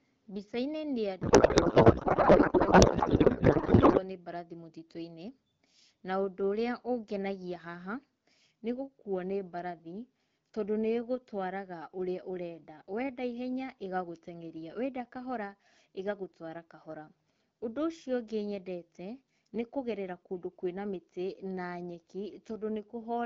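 From 1.21 to 4.03 s the speech gives way to garbled noise and warble, a codec payload misread. The AMR-WB frames were packed octet-aligned but decoded as bandwidth-efficient, so every field is read from the wrong bit position. The result barely tracks the talker. On a spectrogram, harmonic striations vanish into smeared broadband texture; the waveform envelope loses its syllable shape. Clean 12.65 kbit/s wideband speech resumes at "nĩ mbarathi".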